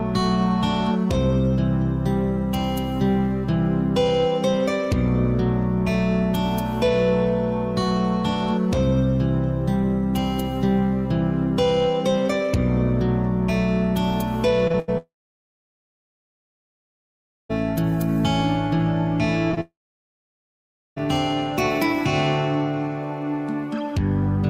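Repeated packet loss (robotic sound) runs from 14.67 to 14.90 s. Three separate holes open within about a fifth of a second, the longest about 81 ms. Each is patched by stretching the preceding sound, so concealment makes up more than half that span. The audio turns choppy and machine-like, with fragments missing between the patched pieces.

A long network dropout follows from 14.98 to 17.51 s. The last sound is carried on briefly as a fading buzz or hiss, then roughly 2.4 s of silence sets in before audio resumes further along, skipping what should have played. The likely cause is a stall in packet delivery, with the receiver padding the gap until the stream recovered.

Short concealed packet loss hits twice back to back, at 19.51 to 19.55 s and 19.55 to 19.59 s, each missing about 20 ms. The decoder bridges both holes by extending the prior sound and then blending into the real audio again, which leaves a quick smear or wobble rather than a clear break.

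A second long network dropout comes right after, from 19.61 to 20.98 s. It has the same brief fading continuation and then roughly 1.25 s of silence, and the audio picks up later without the lost stretch.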